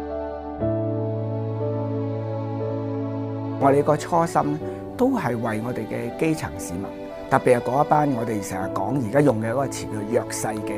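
Listening through the clip, nothing stood out as a technical fault at any point.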